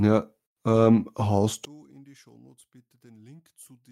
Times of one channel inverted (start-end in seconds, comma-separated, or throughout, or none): 1.65-3.92